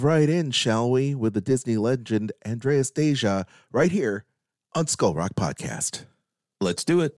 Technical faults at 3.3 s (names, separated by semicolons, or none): none